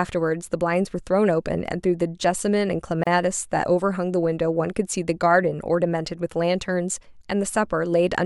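A speech recording with a gap at a join of encoded pieces, a gap of about 32 ms from 3.04 to 3.07 s. The sound cuts out and then resumes exactly where it stopped, so nothing is lost or skipped. That sets it apart from a dropout or lost packet, which removes material. The edges are smeared by the codec. This points to separately encoded segments being joined without trimming the encoder delay and final-frame padding.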